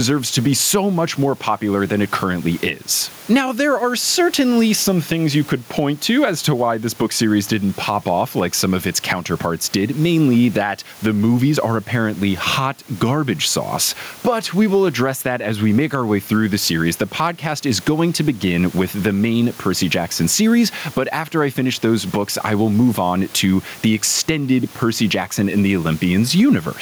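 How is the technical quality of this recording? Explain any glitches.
The recording suffers from gain pumping throughout. The gain was likely set far too high, with a fast limiter clamping every loud syllable. The background sits about 32 dB below the speech, and the gain swings by roughly 10 dB, leaving the speech squashed.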